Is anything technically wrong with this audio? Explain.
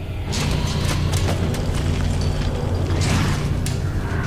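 No, nothing is technically wrong with this audio.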